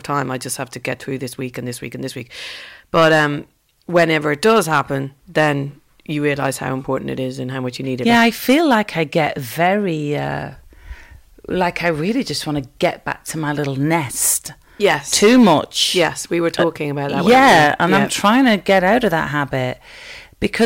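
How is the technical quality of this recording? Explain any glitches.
The recording suffers from hard clipping that runs through the entire speech clip. The signal was driven about 12 dB past what the converter or a later stage could pass, so the loudest peaks are sheared flat at the ceiling. Only around one or two percent of samples hit that limit, but the squared-off tops generate harmonics high in the spectrum. The result is a gritty crackle and edge on the louder syllables.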